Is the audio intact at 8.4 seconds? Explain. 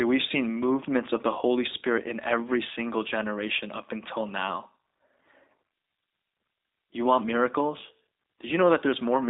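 No. At 8.4 s the speech carries G.729 codec damage, present for the whole clip. The sound points to an 8 kbit/s G.729 link. It rebuilds speech from a vocal tract filter, pitch predictor and sparse pulses. Band is 300 Hz to 3.7 kHz. Speech sounds rough, thin and synthetic.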